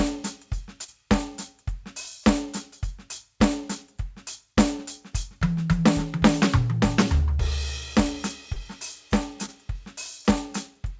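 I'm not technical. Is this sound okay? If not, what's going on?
No. This music has three moments of short concealed packet loss, at about 0.84, 8.54 and 9.46 seconds. Bits of sound between 20 and 40 thousandths of a second long never arrived, and the receiver covered each gap by stretching the preceding sound. That makes a brief smear or wobble rather than the silent hole of a plain dropout. Through the call link, nothing above 8 kHz comes through.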